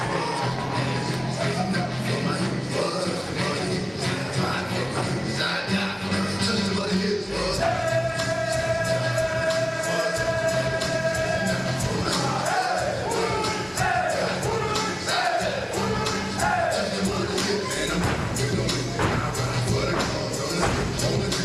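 A jitter buffer speed-up runs from 6.67 to 7.17 s: with excess audio queued, the receiver repeatedly cut short pitch-period-sized pieces, dropping around 150 ms in total, so the sound plays at about 126% speed with its pitch unchanged and feels briefly hurried.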